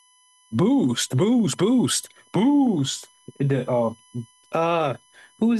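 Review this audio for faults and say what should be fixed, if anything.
A USB whine runs through the whole speech clip: a fixed-pitch tone built on 1 kHz, loudest at its 16 kHz multiple and roughly 35 dB below the speech. It comes from 1 ms bus frames leaking into power or ground. Its kilohertz spacing, not 50 or 60 Hz, separates it from mains hum. To prevent it, power the interface separately or fit a USB isolator to break the ground path.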